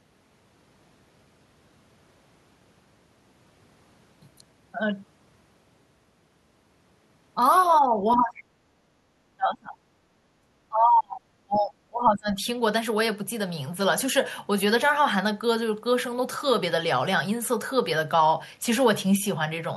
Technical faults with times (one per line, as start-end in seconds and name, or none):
7.85-8.48 speech suppressed in double talk
8.16-8.25 other side's voice leaking through
8.80-9.09 background gated by the echo canceller
9.37-9.76 speech suppressed in double talk
10.29-12.40 speech suppressed in double talk